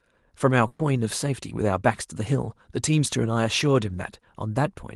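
At 0.67–0.82 s a burst of packet loss drops 120 ms, replaced by the last sound held and fading: flat, smeared, decaying spectrogram bands.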